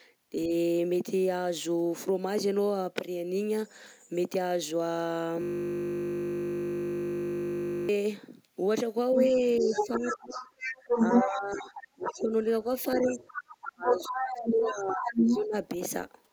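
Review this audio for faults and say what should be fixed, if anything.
A system hang loop runs from 5.42 to 7.89 s. The machine or audio driver stalled while the hardware kept replaying the same 20 ms buffer, so one tiny slice of audio repeats over a hundred times at 50 Hz and comes out as a steady buzz. Preventing it means finding what blocks the audio thread and giving it real-time priority, so it never stops refilling the buffer.

Other side's voice leaking through appears from 9.17 to 11.84 s and from 12.92 to 15.41 s. The far end's loudspeaker signal was likely not fully removed by the echo canceller, so a second voice sits in the mix at roughly the same loudness as the talker. Better acoustic separation between loudspeaker and microphone, or a headset, plus echo cancellation tuned to this device's echo path would stop it.

Speech suppressed in double talk affects 0.34 to 0.52 s, 9.31 to 10.64 s, 10.98 to 12.34 s and 12.95 to 15.55 s. 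With both sides talking at once, the echo canceller likely could not tell the local talker from the echo and attenuated both. The talker dips only slightly in the first brief moment, but in the later stretches the level falls by a large margin, fifteen to twenty-five decibels at worst. An echo canceller with robust double-talk detection, one that attenuates less when both sides speak, would preserve the near-end voice.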